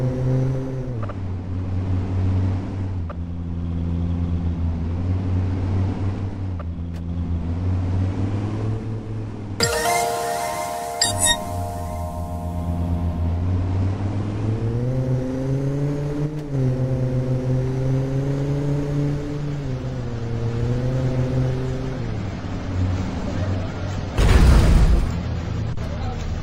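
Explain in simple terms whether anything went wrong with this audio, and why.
Nothing went wrong with this audio that a careful listener can pick out. The sound carries on steadily from beginning to end, with nothing interrupting or disturbing it along the way.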